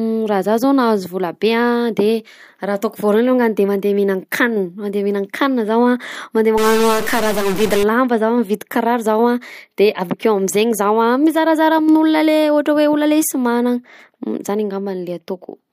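A harsh, buzzy distortion grips the speech from 6.58 to 7.83 s, with gaps filling with gritty noise about -20 dBFS down. It is likely a stuck bit, one converter data line frozen so about half the samples jump by that bit's weight.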